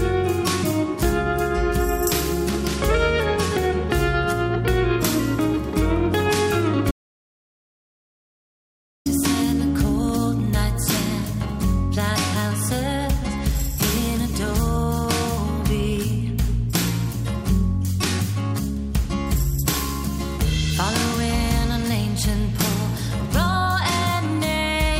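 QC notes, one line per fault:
6.91–9.06 s, audio dropout to silence: sound cuts off abruptly for 2.15 s into dead digital silence with no room tone, unlike a natural pause; likely a lost input.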